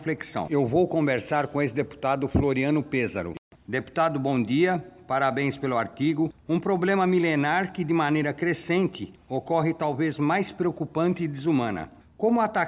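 No technical faults are audible.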